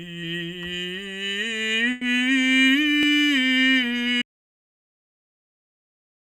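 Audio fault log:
1.91–2.03 s, burst of packet loss: Right here the music stops moving forward and just smears the last bit of sound for about 100 ms, fading as it goes, so you get a short held sound instead of what should come next. That's the receiver papering over a run of packets that never arrived in time. When the music comes back it has jumped ahead, because roughly 100 ms of the piece was skipped outright.
4.22 s to end, audio dropout to silence: At 4.22 s the music cuts off mid-flow and what follows is dead digital silence, with no room tone or hiss at all, right through to the end of the clip. That flat, silent gap is what you hear when the recorder keeps writing samples but nothing is feeding it. The likely culprit is the input being lost, say a device disconnecting, a link failing or something getting muted. Everything after that point is simply gone.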